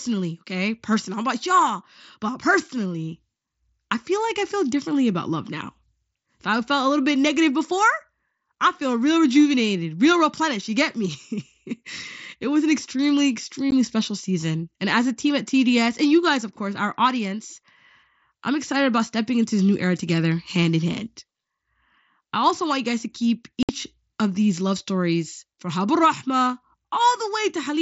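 Speech over a wideband mSBC headset link with unconcealed Bluetooth headset packet loss: a short, sharp-edged dropout at 13.71 s right after "it was an extremely", and a 60 ms hole from 23.63 to 23.69 s after "you guys to keep", where lost packets were simply replaced by silence or an idle pattern.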